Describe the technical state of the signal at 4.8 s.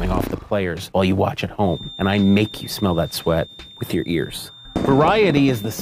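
A thin, steady 3.6 kHz feedback whistle sits well below the sound from 1.6 s to the end, likely a loudspeaker-to-microphone loop held just short of runaway.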